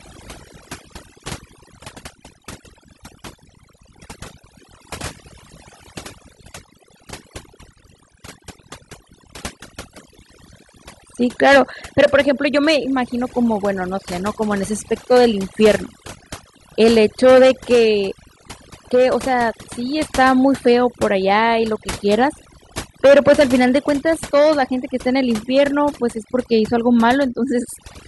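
Across the whole recording the background sinks to near silence dotted with twinkling specks. This is overdone noise removal: the reduction was set too hard, pushing individual frequency bands near the noise estimate far down and taking quieter speech detail with them.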